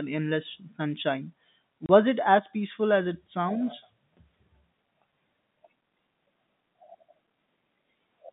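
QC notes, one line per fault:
1.86–1.89 s, packet loss filled with silence: the speech drops out for 30 ms, which fits one lost 30 ms packet. The receiver played digital silence in its place, so the hole has hard edges. The telephone-band sound around it is intact.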